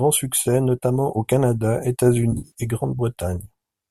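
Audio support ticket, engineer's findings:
AAC frame loss with concealment, 2.32 to 2.52 s: smeared, phasey, noisy patch. Losses scattered over about 220 ms, 150 ms gone in total, longest gap around 70 ms. Decoder's papering over with recycled spectrum, sign-scrambled or energy-interpolated. Likely the AAC-ELD stream (light grain, fits 64 kbps) dropping packets.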